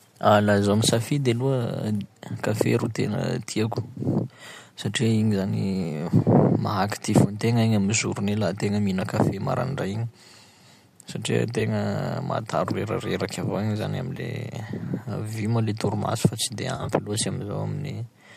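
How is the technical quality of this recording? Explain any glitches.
The speech has three brief dropouts where audio frames went missing. Around them the sound is lightly coloured, likely by low-delay AAC compression at about 64 kbps.

AAC frame loss with concealment occurs at 11.60 s, 14.17 to 14.20 s, and 16.76 to 16.89 s. Coded frames were lost, and the decoder rebuilt each gap from the last good spectrum. The first gap, about 10 ms, fits one short frame. The second, about 20 ms, fits two frames. Each sounds like a quick smeared, noisy blip. The third is worse: about 70 ms of losses scattered over 120 ms, the longest run around 30 ms, giving a smeared, phasey patch.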